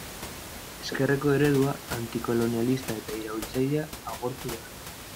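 No technical faults are audible.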